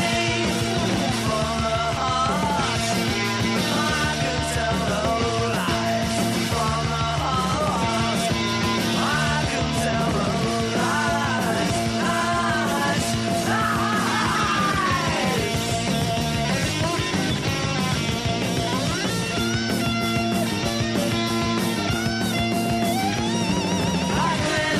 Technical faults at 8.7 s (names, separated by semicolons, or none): none